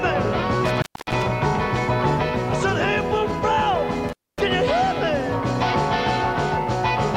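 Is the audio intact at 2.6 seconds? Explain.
Yes, at 2.6 seconds the audio plays through intact, with no dropout, click, distortion or other fault to be heard at that moment.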